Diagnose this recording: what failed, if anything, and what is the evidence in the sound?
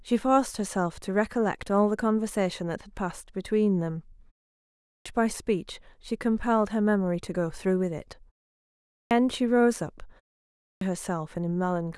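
Speech comes back out of silence with its opening bitten off: at 4.73 s, 8.76 s and 10.46 s the first sound after a gap of about 0.34 to 0.53 s is missing, and the audio starts abruptly mid-onset, with roughly 0.33 to 0.35 s lost each time. This is a clipped start after a pause at the playback stage. The output device drops into a low-power or idle state during the silence and takes about a third of a second to wake and lock again, swallowing the first sounds.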